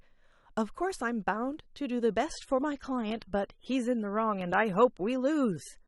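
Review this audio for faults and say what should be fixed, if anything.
The adaptive stream fell back to a lower bitrate at 2.26 s, when the connection slowed, and stayed there to the end. The quality changes abruptly with no gap: codec artefacts rise, consistent with AAC dropping from about 96 kbit/s to under 30 kbit/s. To prevent it, give the player more buffer headroom or a steadier connection so it can hold the higher rendition.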